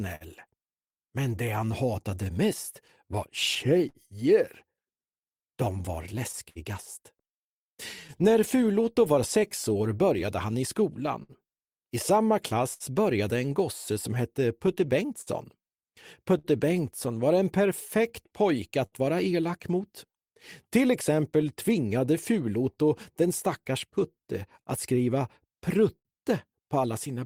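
Clock drift between sender and receiver runs through the whole clip, with the sender's clock roughly 5% slow, so the receiver's buffer keeps draining and small timing hiccups recur unevenly. Scattered short gaps appear from 0.15 to 8.33 s, about ten of them, the longest around 70 ms. Each lost or late packet was patched by continuing the last sound, leaving brief ticks or smears that show as short, smoothed repeats in the spectrogram. From 1.22 to 27.15 s, repeated timing corrections slow playback to 98% by repeating short pieces, adding about half a second overall. The waveform shows small duplicated segments. Further scattered short gaps follow at 10.26 to 12.83 s (about five, up to roughly 70 ms), 14.67 to 22.09 s (about ten, up to roughly 70 ms) and 24.15 to 26.08 s (about three, up to roughly 50 ms).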